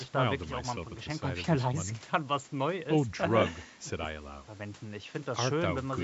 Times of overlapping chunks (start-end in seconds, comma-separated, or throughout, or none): none